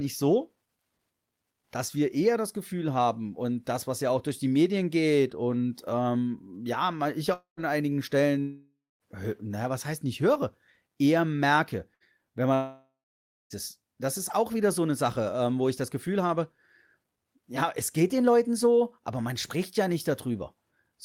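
After "und ähm ja ich", from 7.33 to 7.60 s, then 8.41 to 9.03 s before "naja was heißt nicht", and 12.54 to 13.53 s, the sound stretches into a fading buzz or hiss and then goes silent. The likely cause is a long network dropout. On a spectrogram, smeared horizontal bands fade to a blank gap.

At 11.94 to 12.03 s, after "nicht höre eher merke", a burst of packet loss leaves a brief held buzz or hiss that dies away. On the waveform it appears as a short, shrinking repeated pattern.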